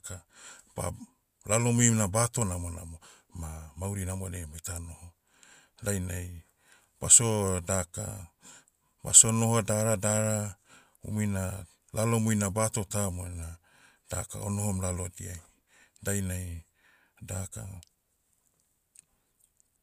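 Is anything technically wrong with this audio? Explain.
No, nothing technically wrong can be heard in this recording, as the signal carries no audible dropouts, distortion, noise or other faults.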